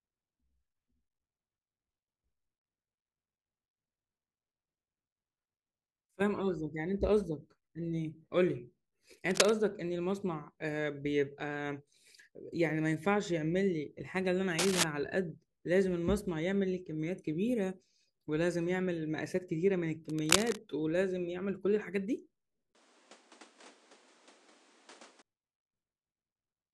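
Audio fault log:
9.31 to 9.50 s, 14.59 to 14.84 s and 20.09 to 20.62 s: cable scratch noise. Three bursts of dense, ragged scratching sit over the speech. Each is roughly as loud as the speech itself. They last about 0.19 s, 0.26 s and 0.53 s. The texture is uneven and rustling, not a steady hiss. The likely cause is a worn cable or connector being moved, so its contact resistance jumps rapidly and throws noise into the signal.
22.73 to 25.24 s: input switched to a poorer device. A gap of about 20 ms marks the switch. After it, nothing above 10.5 kHz gets through, so the speech loses its top end and turns duller. A new noise floor appears, about 30 dB below the speech. The overall level stays roughly the same. At 25.24 s the fuller sound comes back. The system has likely changed mid-recording to a narrower-band microphone with its own background noise.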